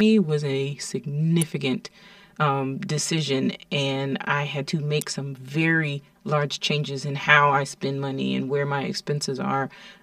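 Throughout the speech, channel delay (comb filtering) leaves one channel about 5 ms late before mono summing, cutting evenly spaced notches from around 100 Hz upward; the sound is hollow, and a spectrogram shows fixed dark horizontal bands.

At 1.42 s, and at 5.01 s between "and I had to" and "some very large changes", a sharp snap is heard. Each is likely an electrical switching spike, appearing as a thin vertical line on the spectrogram and a narrow spike on the waveform.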